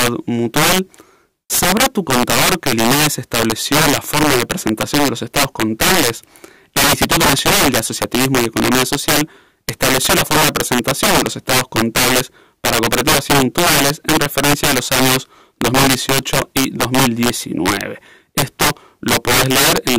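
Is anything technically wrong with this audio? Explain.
Yes. Throughout the speech, loud moments break into violent, snapping cracks, harsher and more abrupt than ordinary clipping. This is integer overflow: the signal is driven about 15 dB too hot, and instead of being held at the maximum, any sample past the integer limit wraps around to the opposite extreme. Roughly 7 percent of samples cross that limit, so each louder peak jumps across the full range and produces a sharp crack rather than a flattened top.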